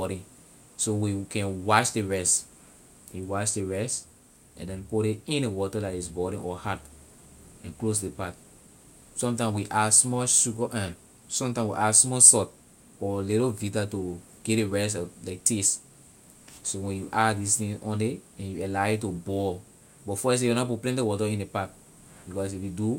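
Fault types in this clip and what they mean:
No faults detected.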